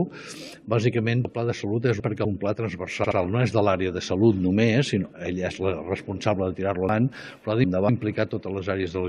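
From 1.25 to 2.25 s, chunks out of order: a 250 ms chunk plays three chunks late, jumbling that second. Unlike a dropout, nothing goes missing. At 3.03 to 3.17 s, repeated frames: a 70 ms block plays twice more, a stutter adding 139 ms, with the same sound recurring rather than being reshuffled. From 6.89 to 7.89 s, the same 250 ms chunk misordering recurs.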